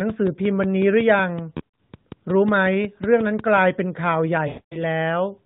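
Speech heard through an AMR narrowband phone link warbles briefly around 1.58 to 1.78 s, then smears and fades to silence from 4.48 to 4.83 s. These are lost AMR speech frames: the decoder extrapolated past corrupted frames, scattered at first, then 240 ms of lost frames.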